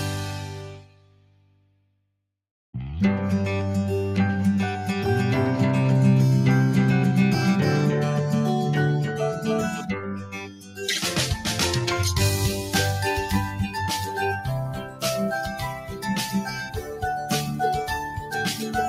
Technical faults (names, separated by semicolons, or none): noise suppressor applied to music or sounds; sound cut by the noise suppressor; doubled audio track